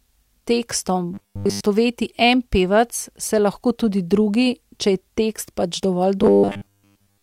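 Speech with robotic sound from repeated short buffers at 1.14–1.61 s and after "tekst pač dovolj" from 6.23 s to the end: a fixed 100 Hz buzz, with a spectrogram showing rigid harmonic stripes and the waveform showing repeating 10 ms cycles, likely from tiny buffers being repeated.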